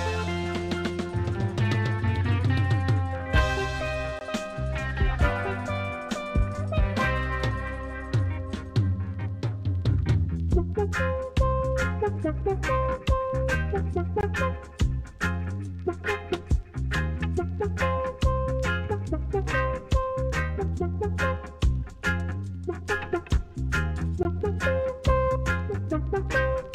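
At 4.19 to 4.21 s, 14.21 to 14.23 s and 24.23 to 24.25 s, the sound drops out completely. Each hole lasts 20 ms. This is a gap between chunks. The audio was handled in 10-second pieces, and silence was inserted at each join. Nothing is missing from the sound itself. It is simply pushed later, so each dropout lands 20 ms further along than the last.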